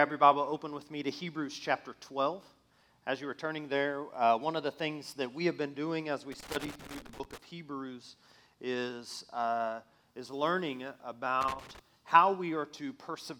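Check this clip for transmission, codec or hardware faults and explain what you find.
There is a hardware fault: loose connector crackle, occurring twice, from 6.32 to 7.38 s and from 11.41 to 11.79 s. A worn or dirty contact in the signal chain is intermittently making and breaking, so the audio is chopped on and off at an irregular rate, with pops where any DC offset on the line jumps. The result is a ragged burst of scratching crackle laid over the sound, about a second long the first time and under half a second the second.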